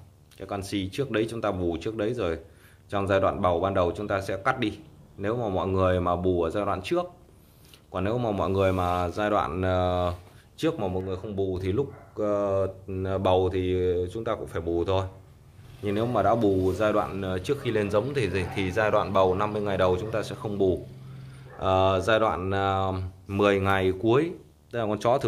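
Running underneath the whole recording is a video or display buzz: a steady 75 Hz hum with a gritty hash riding above it, sitting roughly 35 dB below the main sound. A 75 Hz fundamental matches a monitor's field rate, so interference from a screen or its video cable is coupling into the audio wiring or input stage. It is most exposed in quieter passages, where the buzz and hash remain constant.

At 11.01 s the level drops abruptly by about 4 dB and stays there until 11.56 s, when it steps back up. This is a sudden gain jump: the wanted sound and the background noise shift together, with no fade in or out at either edge. Because everything moves in one step, the likely cause is a digital gain change applied from one sample to the next without a ramp.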